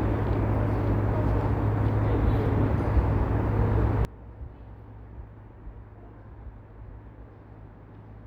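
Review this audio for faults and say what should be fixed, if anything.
From 4.05 s to the end, the sound suddenly collapses by about 22 dB, with its centred body largely gone and only a faint residue left. The likely cause is one channel inverted. With one stereo channel's polarity flipped, everything common to both sides cancels when they are combined to mono, leaving just the small difference between them. To prevent it, check the polarity of each channel in the chain and verify mono compatibility before delivery.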